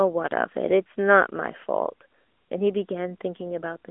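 From start to finish the speech has gone through the AMR narrowband mobile codec: it's squeezed into a 250 Hz to 3.4 kHz phone band, with nothing above 3.6 kHz. The plainly audible buzzy, synthetic edge fits a mid-rate 10.2 kbps mode.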